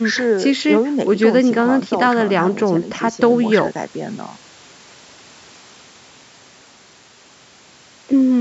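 No technical faults can be heard in this speech. It has passed through a call's microphone processing, which removes the lowest bass and leaves nothing above 8 kHz, and that is normal for such a path.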